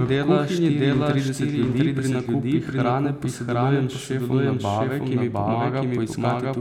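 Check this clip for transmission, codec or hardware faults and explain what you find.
One fault runs through the whole clip: a doubled audio track. The speech is heard twice, the second copy trailing roughly 0.7 s behind at about equal level. It is likely a second capture path or an edit holding two copies out of step. Unlike echo, the copy is a single full-band repeat with no decay or room colour.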